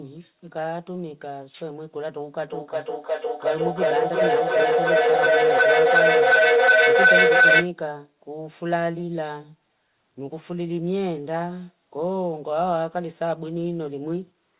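A speech recording where a piercing tone near 1.5 kHz swells from 2.49 to 7.73 s, pulsing about every 0.4 s and peaking about 10 dB above the voice. This is feedback howl: two devices in the same room on one call, their microphone-to-loudspeaker loop growing louder with each trip.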